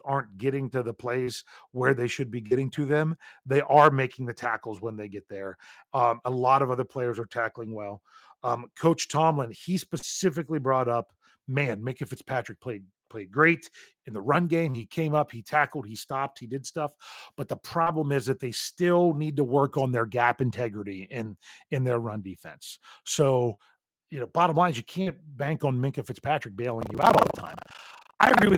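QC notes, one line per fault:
1.23, 2.47 (just before "to them they are"), 9.99, 14.70, 17.82 (before "is that they still"), 25.02 (after "bottom line is you") and 23.54 s, short concealed packet loss: about 40 ms gaps filled by extended prior sound, heard as brief smears; spectrogram shows smoothed, repeated harmonics.
26.79 to 28.57 s, buffer tearing: about a third of each period replays audio from roughly a tenth of a second earlier, causing a 25 Hz robotic buzz consistent with 40 ms periods. The waveform shows hard splices and the spectrogram shows regular vertical stripes.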